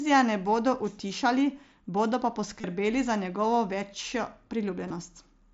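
Concealed Bluetooth headset packet loss: headset packets were dropped and the receiver filled each gap by repeating recent waveform. At 1.09 s the gap is only about 7.5 ms and nearly hidden. At 2.61 to 2.64 s and 4.88 to 4.90 s, longer patches sound buzzy, warbling as the wideband mSBC audio resumes.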